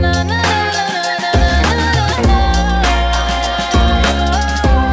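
No technical faults are audible.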